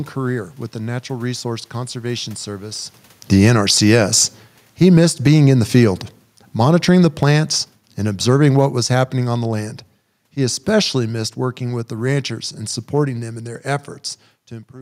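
From 3.17 s to 13.31 s, the speech shows automatic gain falling. The gain control judged the input too loud or its background noise too strong, and kept lowering its gain. The level drops by about 18 dB over those ten seconds, beginning just before "in their". The voice sinks steadily. The room noise behind it sinks by the same amount, which shows the change is in the gain, not the talker. The talker shifting position around 3 s is a separate, natural change.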